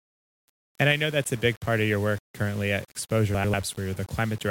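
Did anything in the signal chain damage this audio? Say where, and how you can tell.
Yes. Throughout the speech there is a grainy distortion that rises and falls with the sound, and quiet passages turn gritty or sputter instead of fading smoothly. This is low bit depth without dither, most likely from a sample-format conversion that rounded the audio to very few bits, which fits about 6 bits. The error follows the signal, at roughly 25 dB below it.

From 3.34 to 3.54 s there is a short garbled flutter where the sound jumps. Two adjacent runs of about 96 ms each play swapped, so that stretch comes out with its halves exchanged. This is frames out of order, introduced at the codec's transport or storage stage, which fits two runs of three frames each. No time is lost, because the same material is still there, only rearranged.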